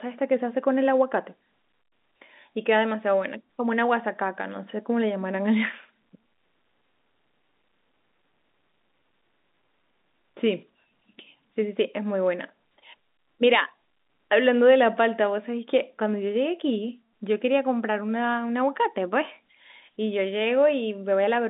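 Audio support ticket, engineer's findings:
No faults found in the speech. Telephone-band path audible as expected, content roughly 200 Hz to 3.7 kHz with nothing above 3.8 kHz, consistent with G.711 A-law at 64 kbps.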